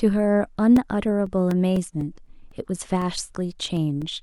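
From 0.76 s to 4.02 s the clip shows periodic USB or driver dropouts: something keeps stalling the USB bus or the audio driver on a fixed schedule, every 0.25 s, and each stall loses a couple of milliseconds of speech, which is replaced by silence. Across that span this produces roughly fifteen evenly spaced ticks, a steady clicking pulse riding on the speech and most audible wherever the voice is sounding.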